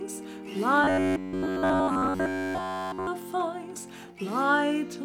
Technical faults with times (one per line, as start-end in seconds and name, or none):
0.84-3.07 robotic sound from repeated short buffers